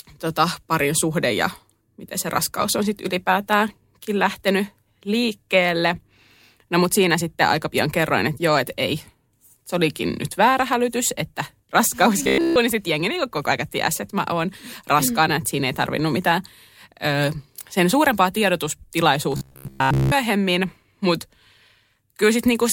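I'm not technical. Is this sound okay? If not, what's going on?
No. From 12.23 to 12.56 s, just before "niin sitten jengi niin", and again from 19.32 to 20.13 s, the speech turns into a flat, metallic drone. This is robotic sound from repeated short buffers, likely because audio arrived too slowly and a 15 ms slice was looped. That produces a steady 66.7 Hz buzz. The first stretch is fully affected and the second mostly. Unlike gaps or stutters, the speech never stops.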